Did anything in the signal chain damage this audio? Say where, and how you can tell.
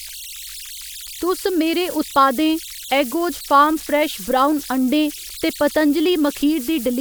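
Yes, at the converter: converter idle tones run throughout, heard as a whistle around 3 kHz in the pauses between speech, about 17 dB below the signal. An undithered delta-sigma modulator locks into repeating bit patterns on small inputs. Unlike a fixed interference whine, the tone's pitch follows the input offset.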